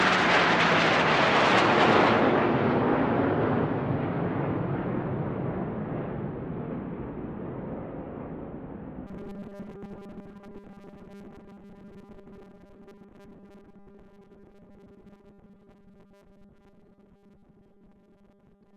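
From 9.07 s onward, audio likely arrives too seldom, so 5 ms buffers mostly repeat, producing robotic sound with a rigid 200 Hz buzz.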